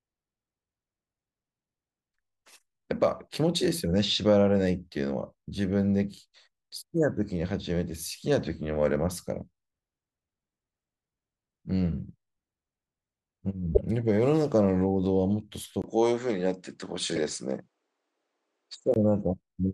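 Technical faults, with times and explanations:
13.74–13.81 s and 17.08–17.18 s, corrupt frame decoded: damaged compressed frames got played anyway, so misread gains and codes throw energy into the wrong frequencies. The first is a single loud glitch, peaking near -5 dBFS; the second is a quieter, roughly four-frame glitch.
15.82–18.96 s, input switched to a poorer device: after a 20 ms dropout the sound turns dull, with nothing above 9.6 kHz and a faint new noise floor well below the sound, at much the same level, then clears again. It's likely a switch to a narrower-band microphone or headset.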